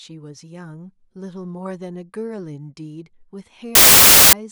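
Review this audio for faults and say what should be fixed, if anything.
From 3.75 to 4.33 s the speech becomes loud, harsh broadband noise: samples built from the wrong bytes, with low-order bits read as high. Unlike clipping, it stays broadband. Fix it by reading samples with the correct byte order and alignment.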